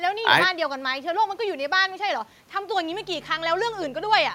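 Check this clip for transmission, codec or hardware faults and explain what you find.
One fault is present: mains hum from 2.89 s to the end at 4.34 s. A ground loop or nearby transformer is leaking the 50 Hz power line into the speech path, adding a steady low drone roughly 20 dB below the speech. A spectrogram shows a flat horizontal line at 50 Hz; the waveform shows a 20 ms ripple under the speech.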